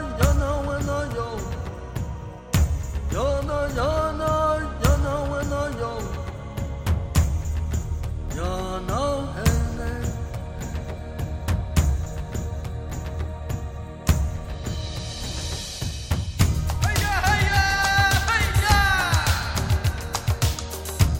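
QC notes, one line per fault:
2.45–8.0 s, resampler restarted on every block: 48 kHz to 44.1 kHz conversion reset each 50 ms block, leaving edge errors heard as 20 Hz ticking under the sound.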